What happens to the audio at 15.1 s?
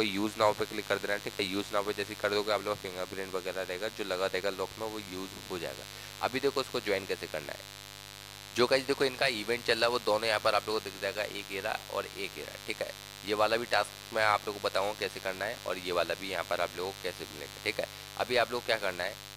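At 15.1 s you're hearing the same mains buzz that runs through the whole clip. Sharp switching spikes from something like a dimmer, a rectifier or a missing shield are leaking in twice per 50 Hz cycle, so you get a stack of 50 Hz harmonics climbing up into the kilohertz range. It comes across as a steady, raspy buzz sitting roughly 15 dB under the sound.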